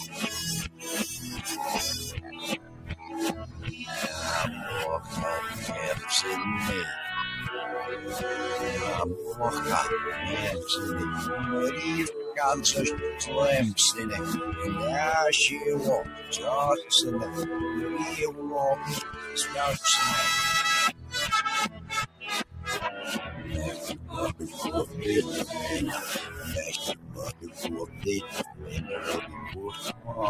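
A noise suppressor applied to music or sounds stays active for the whole clip. It treats steady, sustained material as if it were background noise and keeps pulling it down, so the level swings by around 10 dB as the processing grips and releases. Onsets get through while held parts and tails sink, leaving a pumping, thinned character. On a waveform, the envelope bulges at attacks and then sags. A spectrogram shows sustained energy fading and blotchy instead of continuing smoothly.

Sound cut by the noise suppressor occurs at 0.69–0.86 s, 2.15–3.83 s, 4.99–5.14 s, 16.03–16.9 s, 18.31–19.36 s, 20.92–24.97 s and 26.26–30.12 s. In each span the suppressor judges the sound to be noise and pushes it down harder than the rest. The deepest drops are about 13 dB at 0.69 s, 20.92 s and 26.26 s, about 12 dB at 2.15 s, about 11 dB at 18.31 s, and about 8 dB at 4.99 s and 16.03 s. The short early spans sound like brief dips. 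The longer spans, with roughly one to two seconds affected in total, sound like sustained material sinking and decays being cut short. On a waveform these spans appear as hollowed-out stretches after each attack. On a spectrogram they appear as darkened, patchy regions where steady partials and tails thin out or vanish early.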